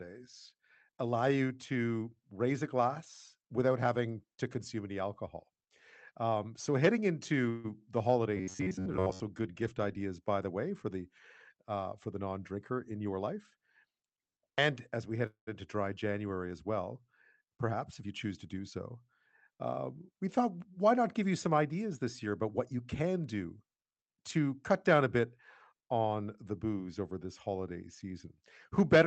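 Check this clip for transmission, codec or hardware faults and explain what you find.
The clip has three kinds of network fault, heard as seven events in this speech.

Call audio freeze, 7.49 to 7.66 s and 15.27 to 15.49 s: the jitter buffer likely ran dry, so the last sound is stretched into a fading buzz for 147 ms and 205 ms. The second freeze ends in about 120 ms of silence. Speech then resumes intact. On a waveform this shows as a smeared tail followed by a gap.

Robotic sound from repeated short buffers, 8.37 to 9.20 s before "good gift ideas by" and 14.23 to 14.58 s before "as we head into": short buffers are being repeated, likely roughly 11 ms each, which imposes a rigid 93.8 Hz metallic buzz. On a spectrogram this appears as flat, evenly spaced harmonic stripes.

Jitter buffer speed-up, 12.16 to 13.40 s (112%), 17.48 to 18.10 s (107%) and 22.26 to 23.09 s after "you some ideas this" (108%): pitch periods are trimmed to cut delay, so the speech sounds hurried at unchanged pitch. 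On the waveform the syllables look compressed.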